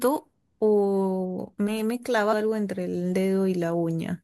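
A speech clip with compressed frames skipped at 2.32 s: about 200 ms of audio vanishes, several 24 ms frames, and the audio jumps ahead.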